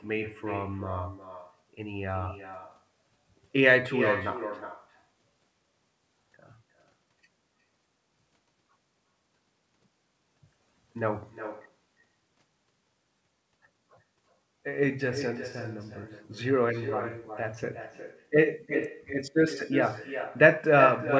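From the first moment to the end, every phrase of speech is followed by a fainter copy of itself, arriving roughly 0.4 s later and about 10 dB down. This is echo with no canceller: the far end's loudspeaker feeds the microphone and the returned signal is never subtracted. Unlike room reverberation, the copy is a distinct, delayed repeat rather than a smeared tail. It is thinner than the direct sound, which itself stops cleanly at 8 kHz as the call codec band-limits it.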